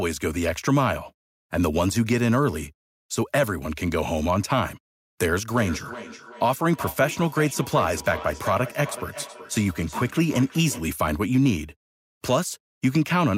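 From 5.57 s to 10.92 s the speech carries a feedback echo between two devices: one device replays another's microphone signal, which is picked up again outside either echo canceller's reach. Repeats arrive roughly 400 ms apart, thinner and ringing, peaking about 14 dB below the speech.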